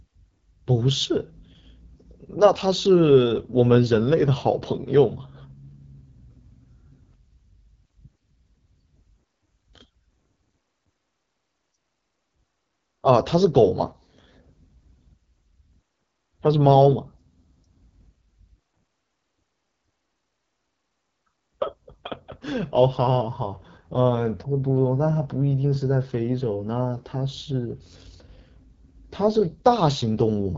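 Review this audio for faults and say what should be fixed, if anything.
The whole recording, from start to finish, carries the sound of the AMR wideband (HD Voice) codec at a low rate. The speech is rough and raspy, which points to the 8.85 kbit/s mode, one of the two lowest. The codec rebuilds the voice below 6.4 kHz from a pulse-excited vocal-tract model and fills the top band with shaped noise. On a spectrogram, the harmonics look smeared, the region above 6.4 kHz is diffuse hiss with no harmonic structure, and everything stops at a flat ceiling near 7.5 kHz. To prevent it, capture or transmit at 12.65 kbit/s or higher, or use a wider-band codec.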